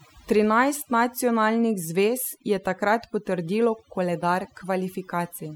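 From the start of the speech to the end, the clip shows overdone noise removal. A noise reduction stage was set too aggressively, so it pulls individual frequency bands down hard whenever they sit close to its noise estimate, and the softer components of the voice are cut along with the noise. Between phrases the background drops to near silence scattered with twinkling specks.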